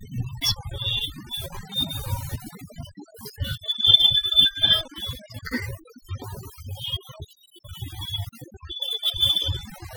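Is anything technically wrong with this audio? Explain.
Yes, overdone noise removal runs through the whole speech clip. The noise reducer was pushed too hard, so individual frequency bands near its noise estimate get cut away, quieter speech detail included. You hear the background drop and break up into twinkly specks.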